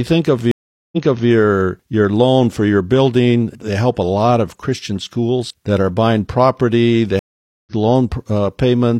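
Speech with two stream reconnects, where the connection dropped, the player went quiet, then came back with a fresh decoder partway through the stream. After "think of", the dropout runs from 0.51 to 1.29 s (about 0.41 s of it dead), and it resumes 0.37 s earlier, so you hear a repeated bit as the server resends. After "are buying property they", there's a 0.48 s gap in the dropout from 7.19 to 7.72 s, and it picks up roughly 0.3 s later, so some audio is simply skipped.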